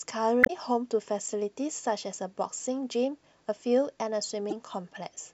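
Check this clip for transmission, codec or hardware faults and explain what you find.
Two faults of one kind appear, both damaged data in a compressed stream, at 0.41 to 0.50 s and at 4.50 to 4.53 s. Corrupted bytes make the decoder misread frames and hunt for the next frame header, so the speech breaks into a brief chirp or squawk, longer at the first spot.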